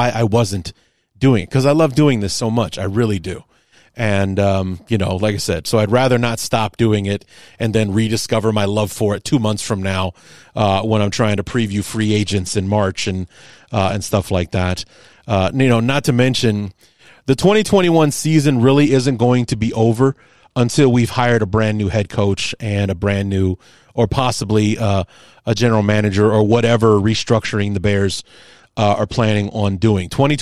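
Speech with three Bluetooth SBC bit pool drops: 11.47–15.21 s after "when I'm trying to", 18.85–22.55 s before "and a brand new", and 26.45–29.97 s after "a general manager or". Treble dulls and gritty quantisation noise rises, consistent with the bit pool falling from 31 to 13 (roughly 94 kbps) on a congested link.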